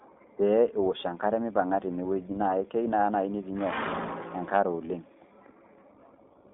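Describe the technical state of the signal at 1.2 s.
At 1.2 s the speech carries iLBC codec damage, present across the whole clip. Each 20 ms frame is coded on its own, which fits 15.2 kbps iLBC, leaving plainly rough, synthetic speech. A spectrogram shows energy confined to about 200 Hz–3.6 kHz, empty above 3.7 kHz.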